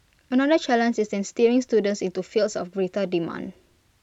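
Speech, with no technical faults to be heard.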